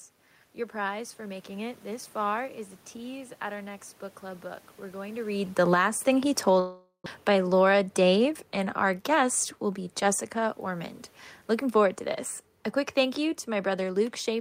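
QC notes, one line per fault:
5.2 to 14.4 s, automatic gain falling: right after "going to", level slides steadily down to the end as the gain control lowers its gain. The room noise sinks with the voice, so this is not the talker moving back around 5.0 s.
6.59 to 7.08 s, long network dropout: the last sound is stretched into a fading buzz, then about 110 ms of silence, and audio resumes with roughly 0.4 s missing, likely from packets that never arrived. A gap that drops content differs from a brief click or glitch.
7.66 to 8.33 s, jitter buffer speed-up: delivery runs about 107% fast as the receiver trims short pitch-period slices to shed roughly 50 ms of built-up delay. Pitch stays put while pace hurries, unlike a resampling error, which would raise pitch.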